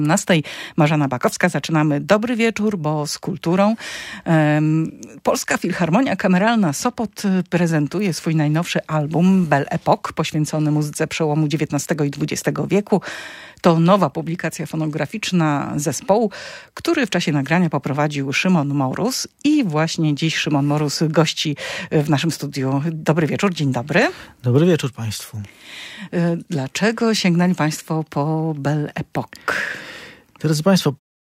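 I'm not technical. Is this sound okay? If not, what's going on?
Yes, nothing is wrong here.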